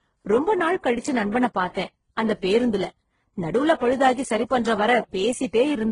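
Throughout, the speech has mixed artefacts heard together and nothing above 10.6 kHz, likely from transcoding between lossy codecs at low bitrates.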